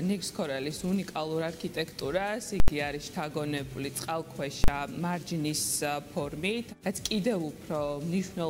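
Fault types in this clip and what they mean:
Invalid numbers at full scale: broken calculations pin the output at one extreme value for 80 ms at 2.6 s and 40 ms at 4.64 s, causing bangs unrelated to the sound, unlike clipping.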